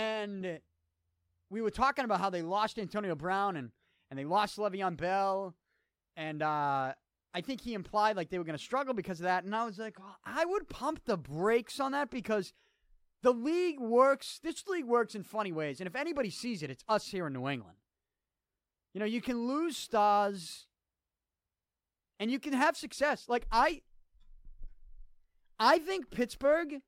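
No technical faults are audible.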